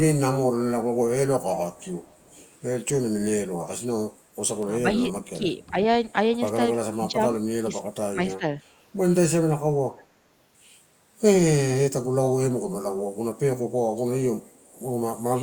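Echo leak at 1.73–2.45 s in this speech recording: a very faint copy of the talker, roughly 35 dB down, trails the original by 320 ms, likely because a far-end loudspeaker's sound reached its microphone and the echo canceller let a remnant back. Speech suppressed in double talk follows at 4.83, 5.24, 5.7, 6.98, 7.63, 8.13 and 8.38 s, in brief dips of a few tens to a couple of hundred milliseconds, from slight to about 20 dB deep, likely as the canceller ducks the talker while the other side speaks.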